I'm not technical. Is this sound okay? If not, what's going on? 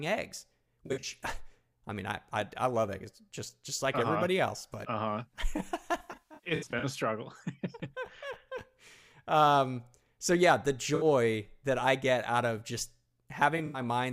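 No. The speech suffers from AAC frame loss with concealment: small chunks of the compressed audio went missing, and the player filled each gap by guessing from the sound just before it. That patching leaves brief smeared, hissy or hollow patches at 0.86 to 1.09 s, at 5.98 to 6.84 s just before "a struggle" (the longest), between "yeah the" and "that I get out" at 10.95 to 11.05 s, and at 13.57 to 13.80 s.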